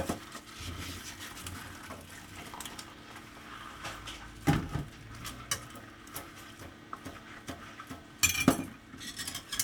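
No technical faults can be heard anywhere in this audio.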